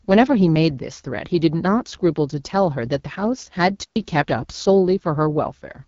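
The speech has passed through the AMR wideband (HD Voice) codec at a low rate, which fits 8.85 kbit/s, making it audibly rough and raspy, with nothing above 7.1 kHz. From 3.84 to 3.96 s, a digital wireless dropout loses too much data and the receiver mutes for about 124 ms, leaving a clean, near-silent hole with no noise burst either side.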